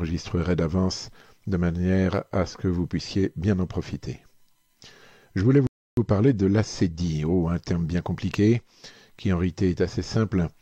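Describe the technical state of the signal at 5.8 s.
At 5.8 s the audio is inside a rebuffering stall running from 5.67 to 5.97 s. The player has run dry of downloaded data and goes silent for about 0.3 s, then picks up exactly where it left off. Nothing is skipped, but that much time is inserted. On a waveform it is a flat gap, and on a spectrogram a clean blank column with no smearing at either edge.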